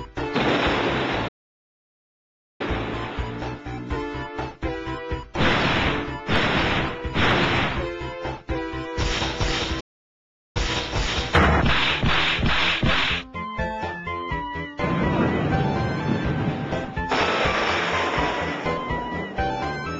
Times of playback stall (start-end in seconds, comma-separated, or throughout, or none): 1.27-2.61, 9.80-10.57